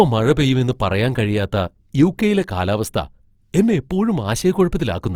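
It's a speech clip with Opus compression audible throughout: grainy, noisy roughness on voiced sounds with content up to about 20.4 kHz, likely a low-rate CELT encode around 24 kbps.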